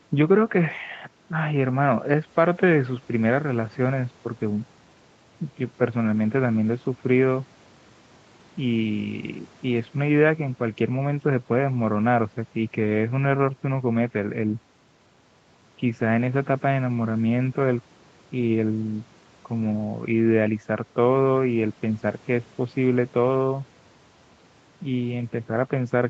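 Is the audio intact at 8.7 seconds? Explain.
Yes, the speech at 8.7 s is intact, with no dropout, glitch or other fault at that moment; it has the call-path bandwidth of the normal microphone processing and Opus coding, with nothing above about 8 kHz.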